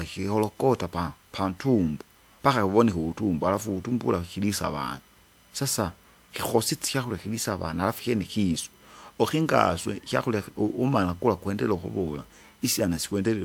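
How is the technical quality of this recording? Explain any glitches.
A steady tonal whine runs under the speech throughout. It is USB whine: current drawn in 1 ms USB frames leaks in through power or ground, producing a fixed 1 kHz tone, strongest at its 3 kHz harmonic, roughly 40 dB below the speech. On a spectrogram it shows as unbroken horizontal lines at 1, 2 and 3 kHz.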